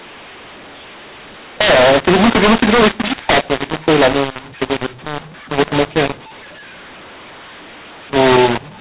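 From start to finish the speech carries a mu-law and A-law mix-up. It was coded as A-law but decoded as mu-law. Sample levels land in the wrong places. Voicing turns harsh and gritty. Quiet gaps fill with hiss. The 4 kHz telephone band stays intact.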